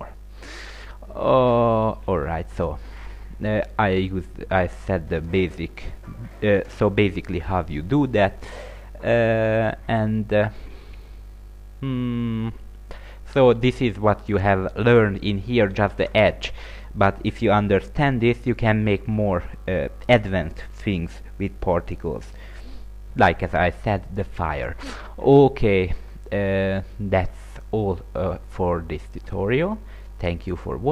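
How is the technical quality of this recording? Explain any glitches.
Nothing here sounds like a glitch; there are no dropouts, clicks, stutters or other disturbances anywhere in the recording, so there's nothing to explain.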